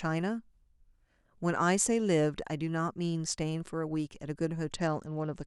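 From 4.74 s to the end of the speech, a Bluetooth SBC bit pool drop starves the codec, which fits a fall from 28 to 10 (around 84 kbps). Treble dulls and gritty noise appears. The spectrogram shows upper bands emptying, with grainy speckle below.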